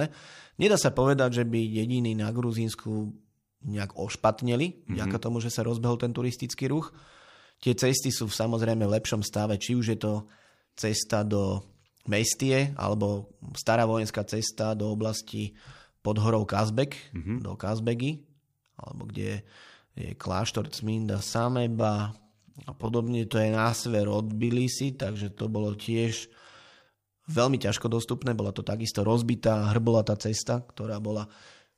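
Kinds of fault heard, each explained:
Time-stretched section: from 20.63 to 27.24 s, right after "alebo kde je", the speech suddenly drags to about 0.66 times its normal pace while the pitch holds steady, likely because software lengthened the passage by repeating short slices of it. The slowed stretch drags, and normal pace returns at "veľmi ťažko dostupné bola". On a spectrogram the harmonics keep their spacing but syllables widen horizontally, and the waveform shows drawn-out, repetitive envelopes.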